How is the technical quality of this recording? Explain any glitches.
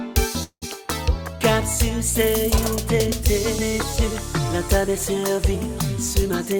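Two glitches affect the recording: a brief stall near the start and a rushed stretch at the very end.

From 0.43 to 0.64 s there is a call audio freeze. Incoming packets were likely held up in transit, letting the jitter buffer run dry, so the receiver stretched out the last sound it had. That comes across as a fading buzz or hiss for about 184 ms, the final 80 ms of it silent. Playback then resumes where it left off. Nothing is lost, but a gap is inserted and the delay grows by 184 ms.

From 6.22 to 6.56 s there is a jitter buffer speed-up. The buffer had built up more audio than its target, so the receiver trimmed away short slices a pitch period or so long, one after another, taking out about 50 ms in total. The sound plays at 115% speed with its pitch unchanged, so that last stretch sounds hurried and compressed rather than higher.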